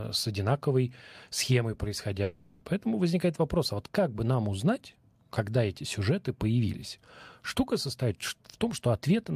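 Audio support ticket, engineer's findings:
Speech clip. Gap from 2.23 to 2.63 s, after "с одинаковой схемой", before "поэтому возникает вопрос а". About 0.38 s of original audio lost. Receiver filled the whole gap with a fading buzz that extends the last sound. No dead silence. Speech resumes past the gap, skipped content not recovered. Likely cause: long network dropout, with packet loss concealment covering the hole.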